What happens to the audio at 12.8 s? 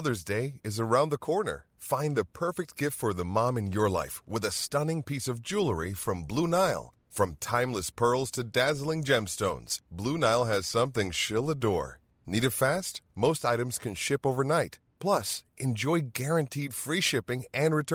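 Nothing goes wrong at 12.8 s; the speech runs straight through that moment without any audible fault.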